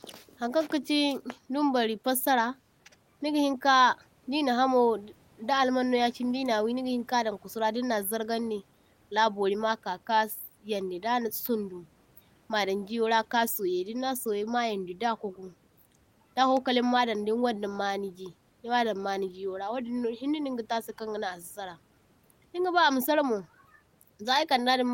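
Nothing in this speech recording points to a system fault; the room's background noise sits about 38 dB below the speech and belongs to the recording itself.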